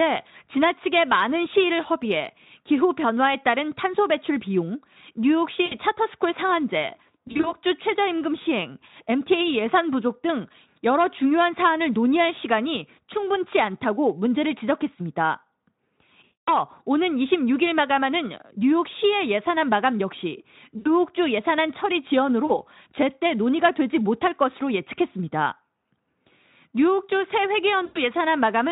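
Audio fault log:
5.65–5.76, 7.27–7.54, 16.23–16.51, 20.77–20.89, 22.45–22.61 and 27.85–27.98 s: VoIP packet loss concealed by the speech codec. About 60, 100, 240, 80, 40 and 100 ms of audio go missing; the 7.27 s loss is scattered over 160 ms. The decoder stretches its last pitch and filter with falling gain, giving a buzzy or noisy smear. Recovery lags briefly afterwards.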